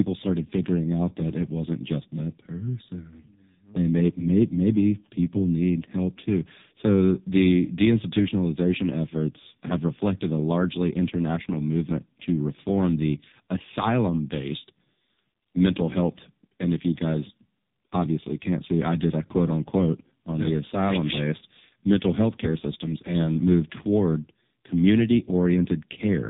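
Throughout the speech, the AMR narrowband mobile codec is at work. Nothing survives above about 3.8 kHz, so the sound is muffled and telephone-thin. Heavy coding at a low rate, consistent with 5.15 kbps, leaves the voice buzzy and synthetic, because the vocal-tract model is fed only a few pulses per frame.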